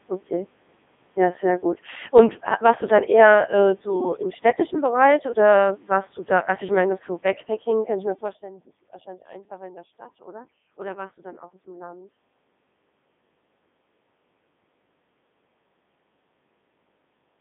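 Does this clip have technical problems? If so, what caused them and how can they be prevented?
Yes. Throughout the clip the speech has passed through a Codec 2 vocoder, which fits its 3.2 kbit/s mode. Only pitch, voicing, energy and spectral shape survive, resynthesised from sine waves, so the speech sounds robotic and buzzy, confined to roughly 150 Hz to 3.6 kHz with nothing above 3.7 kHz. To prevent this, record or send the speech through a waveform-preserving codec at an adequate bitrate instead of a low-rate radio vocoder.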